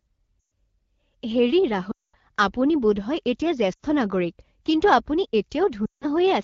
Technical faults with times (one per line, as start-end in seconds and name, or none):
0.40-0.52 lost AMR speech frames
1.91-2.16 lost AMR speech frames
3.73-3.80 lost AMR speech frames
5.85-6.06 lost AMR speech frames